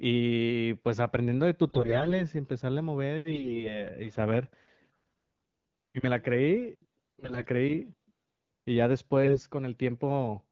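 Speech turns hoarse, scratchy and gargly in four bursts, at 1.68–2.24 s, 3.30–3.81 s, 7.20–7.46 s and 9.24–9.45 s, with the first two at about 30% bit errors and the last two at about 15%. These are AMR bit errors: flipped, weakly protected bits misplace the excitation pulses and skew the codec's pitch, gain and spectrum values.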